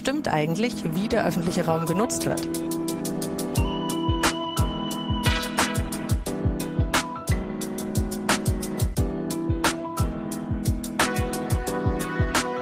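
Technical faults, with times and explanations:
No technical faults, with times or explanations, can be heard in this clip.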